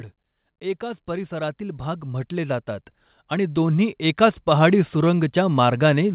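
From 0.61 s to 5.4 s the speech and the background swell together, climbing by about 15 dB over nearly five seconds. This is automatic gain rising: the gain control judged the input too quiet and kept raising its level. The narrowband call sound, with nothing above 4 kHz, rises with it.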